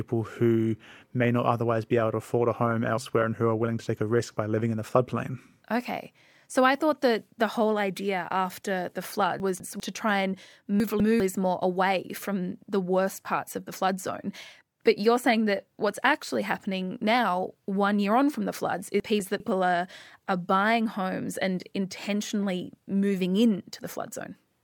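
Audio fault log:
9.4–9.8 s, 10.8–11.2 s and 19.0–19.4 s, chunks out of order: in each spot a 200 ms slice of the speech plays one slot late, swapped with its neighbour, so it sounds briefly jumbled. Landmarks are "whole idea after the", "to try and" and "on from the floods".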